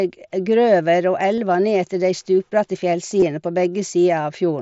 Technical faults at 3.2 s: concealed Bluetooth headset packet loss

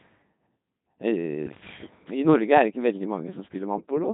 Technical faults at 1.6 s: Codec 2 vocoder; bit errors on digital voice radio

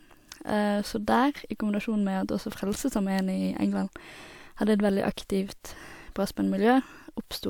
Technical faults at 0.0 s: none

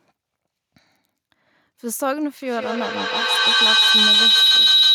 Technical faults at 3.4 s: feedback howl

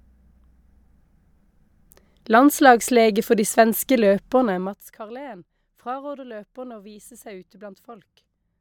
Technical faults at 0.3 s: none

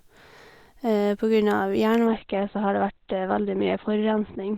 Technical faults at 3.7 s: adaptive stream at a lower bitrate

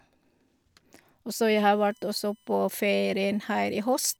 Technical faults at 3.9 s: USB whine

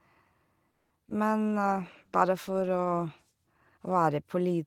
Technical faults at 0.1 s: none

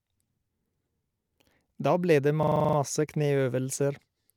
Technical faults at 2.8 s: system hang loop

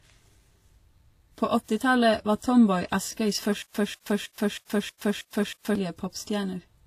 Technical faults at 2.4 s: transcoding between lossy codecs

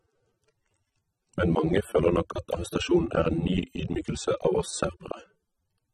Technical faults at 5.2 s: AAC compression

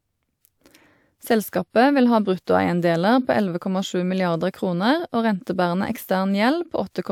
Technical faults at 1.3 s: none

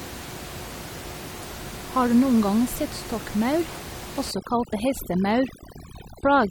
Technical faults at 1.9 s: none

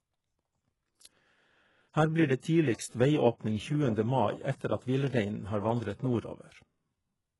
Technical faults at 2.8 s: HE-AAC compression; pre-echo

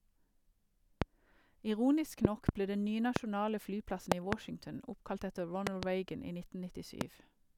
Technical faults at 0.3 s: none

